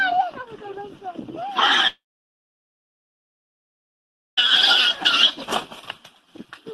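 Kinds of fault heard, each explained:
Long network dropout: From 1.87 s to 4.39 s the sound stops, trails off briefly into silence, then resumes with a part missing, likely from a network outage.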